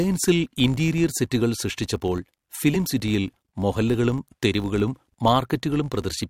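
Speech with a filter restarted on every block: each block starts from silence, leaving a steady 50 Hz buzz of transients that rises and falls with the speech level. A corrupt frame was decoded at 1.32 s, an error around -25 dBFS spanning a few frames. Another at 2.74–2.76 s, just before "സിറ്റിയിൽ മൊഹല്ലകളും തെരുവുകളും", is a louder single-frame error near -10 dBFS, where misread gains put energy at the wrong frequencies.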